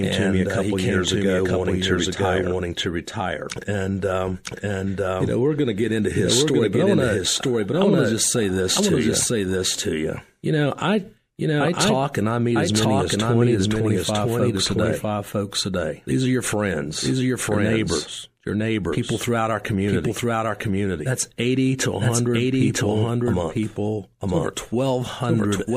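A second path or misaligned edit likely mixed the speech in twice: throughout, a dry doubled audio track trails about a second behind, equally loud.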